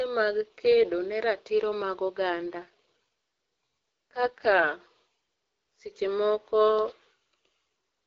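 From 2.3 to 4.68 s, just after "kedo ne ratiro mag", the speech turns rough, raspy and synthetic without any gap or loss of bandwidth, then clears. This is an AMR rate drop: the wideband codec, otherwise lightly coloured, falls back to a much lower rate, which fits a step from 12.65 to 6.6 kbit/s.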